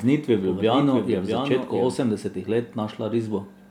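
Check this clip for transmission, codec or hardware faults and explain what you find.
A doubled audio track runs from the start to 1.96 s. A second full-band copy of the speech trails the original by roughly 0.7 s at about 5 dB lower, likely from a slower capture path mixing in. It has no reverberant tail and cuts off abruptly at 1.96 s.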